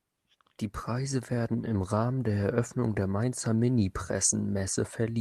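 Packets arriving late repeatedly drained the jitter buffer between 1.69 and 2.98 s in this speech clip, producing repeated stalls (stutter): eleven short holds, none longer than 16 ms, stretch the sound by about 113 ms and make it drag. Between 3.56 and 4.17 s, a jitter buffer slow-down rebuilds the reserve by repeating single pitch periods, adding 37 ms and running the speech at 95% speed without any change in pitch.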